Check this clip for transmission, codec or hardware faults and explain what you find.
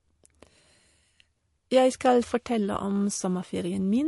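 One fault runs through the whole clip: MP3 compression, heard as a low-bitrate speech encode. Short of bits, the encoder likely discarded the treble outright and dropped weaker frequency lines that it judged inaudible, with those lines flickering in and out from frame to frame. Nothing remains above 11.3 kHz, so sibilants lose their edge, and the damage is plainly audible as a watery, swirling texture with smeared onsets, which fits a rate around 48 kbps.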